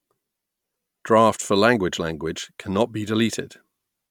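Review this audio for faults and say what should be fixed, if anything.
Nothing to fix: no faults are audible anywhere in the speech.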